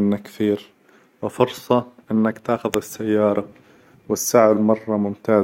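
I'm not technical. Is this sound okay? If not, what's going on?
No. At about 2.74 s, just after "كثير وفرصة إنك تاخذ", there is a sharp snap or tight cluster of clicks laid over the speech. This is an electrical switching spike, likely from a nearby switch, motor or static spark arcing briefly and the audio cable picking it up. Unlike a dropout, the speech underneath keeps going rather than cutting out, so nothing is missing, just something extra on top.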